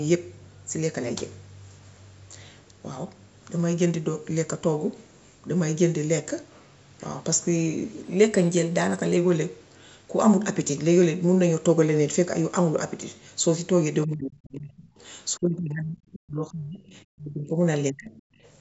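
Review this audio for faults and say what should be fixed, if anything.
From 8.05 to 9.17 s the speech suddenly runs fast and sharp. The speed rises by 5.4 percent and the pitch by 91 cents, close to a semitone. Then both snap back together. This is a drift correction step. Software keeping two clocks in line likely changed the playback rate in one jump to drain its buffer. Speed and pitch move as a pair because it is plain resampling. To prevent this, the clock correction should adjust the rate in small, gradual steps, not one jump.

The speech drops out in three stretches: 14.06 to 14.94 s, 15.40 to 17.59 s, and 17.89 to 18.13 s. The first two fall by about 35 dB at their deepest. The last falls by about 25 dB. Together they last about three seconds. This is speech suppressed in double talk. The echo canceller likely heard both sides at once and could not tell the talker from the loudspeaker echo. 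It turned everything down. To prevent this, the echo canceller needs better double-talk detection, or a headset should be used so little echo reaches the microphone.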